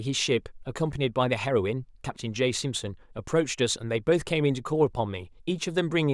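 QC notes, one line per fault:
No faults found on this speech clip.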